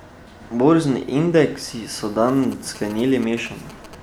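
GSM signalling bursts run from 2.28 to 3.95 s. A nearby 2G phone sends short clusters of radio bursts while signalling, and the audio circuitry rectifies them. The result is a galloping dit-dit-dit of short 217 Hz buzzes, about 20 dB beneath the speech.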